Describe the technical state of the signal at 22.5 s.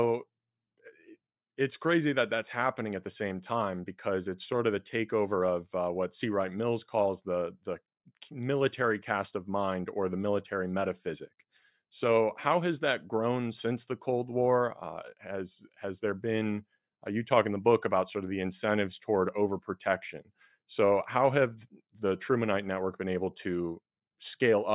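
At 22.5 s the speech signal is intact, with no dropout, clipping, distortion or other fault audible at that point.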